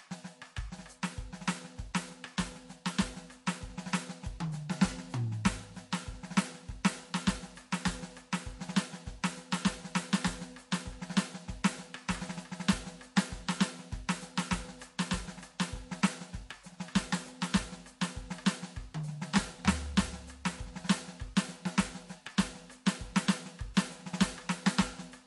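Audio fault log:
Throughout: MP3 compression. The music sounds watery and swirly, with plainly audible damage. Weak detail flickers between frames. Cymbals chirp metallically and attacks smear. This likely comes from low-bitrate MP3 encoding, fitting roughly 48 kbps.
23.74–23.77 s: pre-echo. A short hiss rises by about 11 dB for 24 ms before a sharp attack, which sounds soft. The codec spread noise meant for the loud hit across its whole block. That fits a 48 ms block without switching to short blocks.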